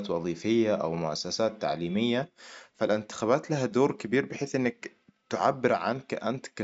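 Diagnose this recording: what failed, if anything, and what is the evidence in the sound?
Nothing to diagnose here: the speech comes through without anything in the sound pointing to a failure at any stage of the chain.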